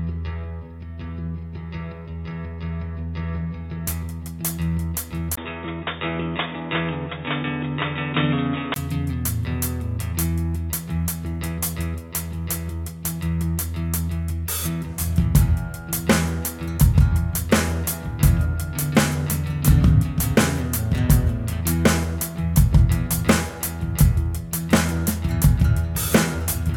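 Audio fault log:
5.35–8.76 s, input switched to a poorer device: the input likely changed mid-recording to a narrower-band device, another microphone or a headset's call profile, then back. A 20 ms silence marks the switch, after which nothing above 3.8 kHz remains, so the sound turns dull and boxy at about the same level. A new background noise sits about 45 dB below the signal until the full band returns at 8.76 s.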